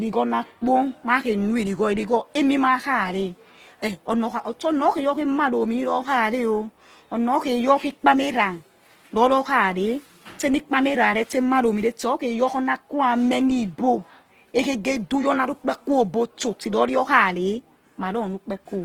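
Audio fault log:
throughout: Opus compression, likely in its music (CELT) mode at a low bitrate near 16 kbps. Speech turns rough and grainy because band energies survive while fine detail is noise-filled; a spectrogram shows smeared, noisy texture up to 20.2 kHz with few holes.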